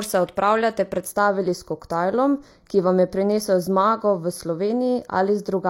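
From 1.05 s, just after "se odpravljate", to the end of the clip, channel delay (comb filtering) colours the speech. One channel arrives roughly 0.2 ms late, and when the two are summed to mono, the shared content cancels at evenly spaced frequencies, with the first notch around 3 kHz. The result is a fixed set of notches that gives the speech a hollow or phasey quality.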